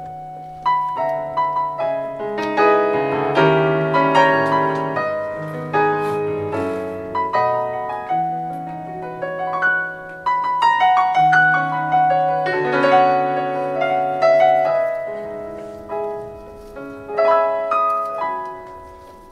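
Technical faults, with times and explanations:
Nothing here to flag, as the audio runs without any technical trouble worth noting.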